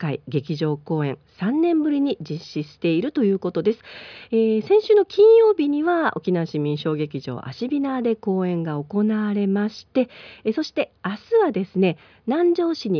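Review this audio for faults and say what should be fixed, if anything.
No technical faults can be heard in the recording. Nothing needs to be fixed.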